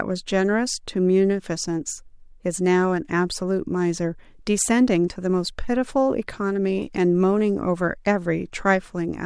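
No technical faults are audible anywhere in the speech.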